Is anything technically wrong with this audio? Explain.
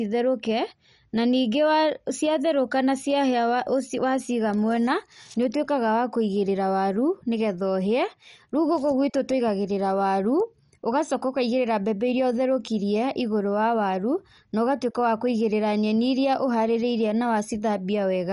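Yes. MP2 compression is present throughout the speech. Nothing survives above 11.3 kHz, and the damage is plainly audible: the sound is dull, with a gurgling, granular roughness and upper detail that flickers in and out. The likely cause is an MPEG Layer II encoder starved of bits, which fits a rate near 48 kbps. Without enough bits, it shuts off its upper sub-bands entirely and quantises the remaining ones coarsely.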